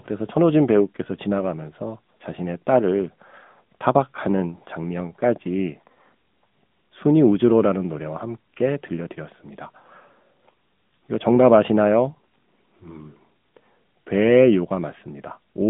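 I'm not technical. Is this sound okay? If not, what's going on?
No. Throughout, the speech has passed through an AMR narrowband mobile codec, the squeezed format used on older mobile calls. It drops everything above about 3.8 kHz and rebuilds the voice from a simplified model, so it sounds thin, muffled and noticeably buzzy, like a phone call.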